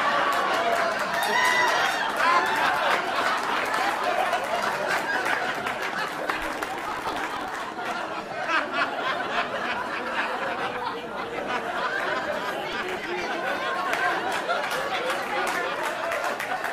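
A burst of gritty, tearing crackle rides on the sound from 6.46 to 7.64 s, and a shorter one returns from 12.73 to 13.24 s. Both are processor overload crackle: the processor repeatedly failed to fill its tiny audio buffers in time, and each missed deadline replayed a fragment of old audio with hard edges. Dozens of these misses in quick succession, at a spacing that points to a buffer of roughly a millisecond and a half, merge into the rough texture, which clears once the load eases.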